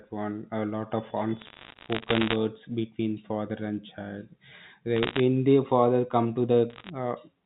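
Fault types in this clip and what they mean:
Bit errors on a digital phone line: flipped bits in the 8-bit phone samples, each knocking one sample off course, with hits on high bits giving a sharp tick. Crackle rides over the speech from 1.40 to 2.36 s after "lot of", then 4.96–5.20 s and 6.70–6.90 s.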